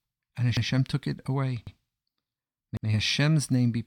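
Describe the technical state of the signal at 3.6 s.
At 3.6 s the signal is intact, with no dropout, distortion, glitch or other technical fault to be heard.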